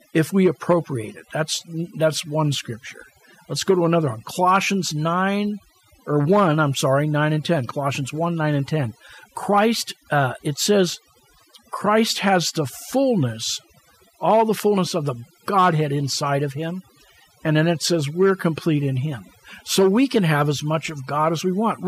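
Right through the speech you can hear overdone noise removal: the reduction was pushed so hard that the background drops and breaks up into twinkly specks.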